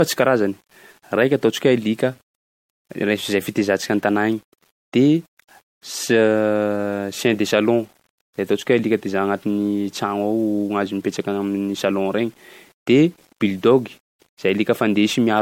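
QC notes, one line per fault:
throughout, low bit depth without dither: quiet passages turn gritty and the softest parts sputter between steps, with grain that rises and falls with the speech, roughly 40 dB down. The likely cause is undithered rounding that fits an 8-bit word length.
throughout, generation loss: the speech sounds swirly, smeared and hollow, with blurred attacks and nothing above 16.6 kHz. This likely comes from a few repeated MP3 encode passes, each requantising on a shifted frame grid, consistent with a low bitrate around 64 kbit/s.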